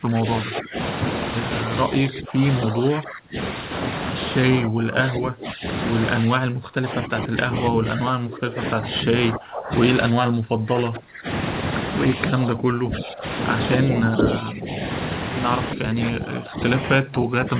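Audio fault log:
0.0–0.8, 2.1–3.4, 4.5–5.6, 6.3–9.7, 10.1–11.3, 12.4–13.3, 13.8–14.7 and 15.8 s to the end: speech suppressed in double talk. The speech repeatedly sinks by about 10 to 25 dB, deepest around 6.3–11.3 s. This is likely an echo canceller attenuating the near talker while mistaking overlapping far-end sound for echo. The band stops near 4 kHz throughout, which fits a narrowband call codec.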